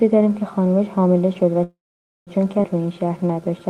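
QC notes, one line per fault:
1.63–2.30 s, call audio freeze: the last instant carries on briefly as a fading buzz, then about half a second of silence before the audio picks up exactly where it left off, with nothing lost. The likely cause is packets held up in transit so the jitter buffer ran dry; the receiver stretched the final fragment to cover the wait, inserting roughly 0.63 s of filler and pushing everything after it later.
2.63 s, skip ahead: the audio lurches forward with almost no gap, the two sides butted together so a short piece of the sound is simply absent, around 300 ms of it. A stretch of audio was dropped while later audio was already waiting, trimming the delay by about the same amount. The join itself is only about 10 ms, which is why it sounds like a jump rather than a dropout.
2.82–3.64 s, jitter buffer slow-down: the sound drags, running at about 89% of normal speed while keeping its pitch, with sustained portions drawn out where single pitch periods repeat back to back. 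With the buffer running low or its target delay just raised, the receiver padded the playback a cycle at a time to rebuild its reserve, adding about 97 ms over this stretch.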